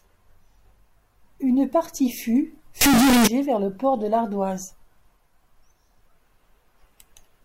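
Between 2.81 and 3.27 s, right after "partie fûts" and before "vers le port de", the speech hits a float read as integer fault. The likely cause is 32-bit floating-point samples being interpreted as 32-bit integers, so each value's sign and exponent bits dictate the amplitude. The waveform turns almost square at an almost fixed, high level, making this stretch suddenly very loud and harsh, with background noise as loud as the speech, though the pitch can still be followed.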